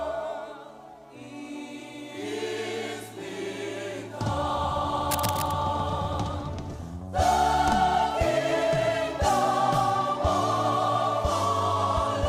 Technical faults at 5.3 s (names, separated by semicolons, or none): cable scratch noise